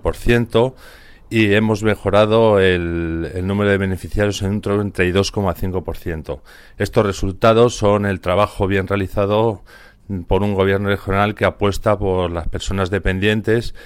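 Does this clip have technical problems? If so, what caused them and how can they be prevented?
No, nothing in this audio points to a technical fault, so there is no cause to trace and nothing to prevent.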